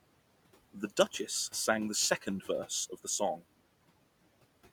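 Noise suppressor artifacts run through the whole clip: the suppressor pulls the steady room noise, which sits about 18 dB below the speech, down by about 18 dB in the gaps and lets it back under each phrase, so the residue pumps.

From 2.21 to 2.49 s, speech is cut by the noise suppressor. It mistakes quiet speech energy for background and turns it down along with the noise, by about 9 dB at the deepest point. Roughly a tenth of a second of sound comes out swallowed and faint.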